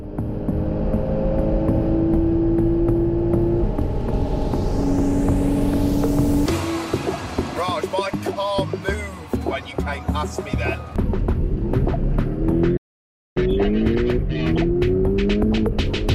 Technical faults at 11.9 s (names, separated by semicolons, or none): none